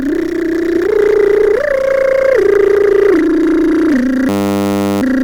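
At 4.29 s the playback system stalls in a system hang loop. The computer or its driver froze while the sound hardware went on replaying the same ring buffer. A 10 ms slice of the music repeats exactly, over and over, until 5.02 s. Because the loop is so short, it repeats at 100 Hz, and the music gives way to a steady, flat buzz at that pitch instead of a stutter.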